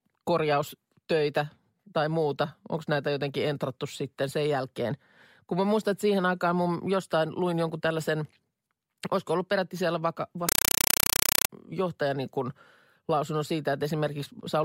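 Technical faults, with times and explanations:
10.49–11.50 s, compressed stream played as audio: after "olisiko ollut peräti siellä", the speech gives way to loud, chattering static, short noise bursts of about 5.3 ms repeating 31.25 times a second. This fits an undecoded AC-3 stream taken as ordinary samples, with each frame's data followed by zero padding. Speech returns at "johtaja niin kuin lausunnon".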